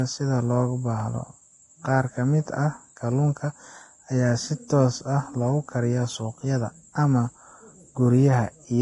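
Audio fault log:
Throughout: Vorbis compression. The top end stops at about 10.6 kHz, and the treble that remains is hissy and grainy. The speech sounds roughened, and consonant onsets are smeared. This is likely from low-bitrate Vorbis coding, around 28 kbps, with heavy codec damage: the encoder keeps a smooth spectral envelope but quantises the high-frequency residue so coarsely that fine detail is replaced by noise of similar energy, and it drops everything above the cut-off.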